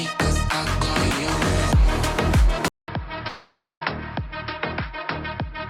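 At 2.68 s there's a gap of about 0.2 s, and when the sound comes back it's clearly duller and boxier, with nothing above about 5.4 kHz. It's roughly 10 dB quieter and sits on a new background noise well below the signal. That points to an input switched to a poorer device, likely a fallback mic or a headset's call profile taking over, and it stays that way right to the end.

Then at 3.27 s you get a long network dropout, likely from the connection stalling. Instead of real audio, the receiver stretches the last bit of sound into a buzzy, fading smear, and the final 0.19 s or so is just silence. Normal sound resumes at 3.83 s, but roughly 0.54 s of material is gone.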